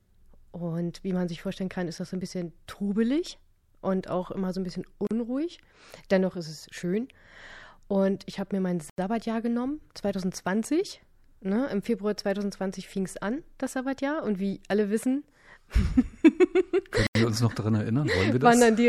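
At 5.07 s, just after "immer so ein bisschen", a gap at a join of encoded pieces opens for about 39 ms. Leftover encoder delay and padding leave slightly smeared silence before the speech resumes.

At 8.90 s, after "ich habe mir mein", and at 17.07 s, before "wir uns noch daran", a block of digital silence cuts in for 85 ms. Each cuts out and back with no fade, which fits a 4096-sample buffer left unfilled.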